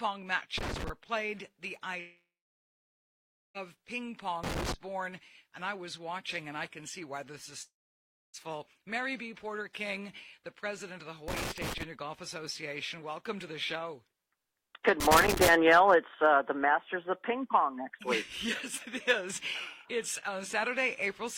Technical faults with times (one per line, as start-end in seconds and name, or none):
0.57-0.89 loose connector crackle
1.99-3.57 long network dropout
4.44-4.74 loose connector crackle
7.62-8.36 long network dropout
11.28-11.83 loose connector crackle
15.00-15.49 loose connector crackle